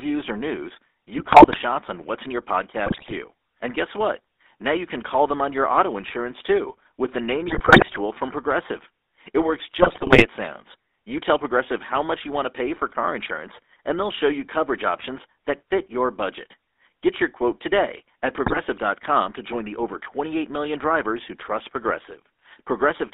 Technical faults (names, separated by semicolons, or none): GSM full-rate codec; GSM bit errors